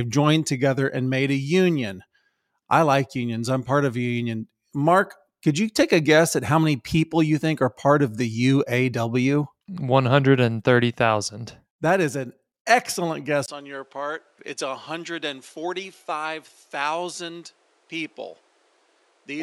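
Right after "is an excellent", at 13.46 s, there's a 20 ms gap and the speech turns duller, with nothing above 11.6 kHz, drops about 10 dB and gains new background noise roughly 35 dB down to the end. Likely the input switched to a poorer device.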